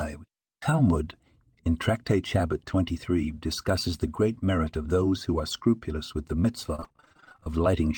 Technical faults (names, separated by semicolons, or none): repeated packet loss (robotic sound)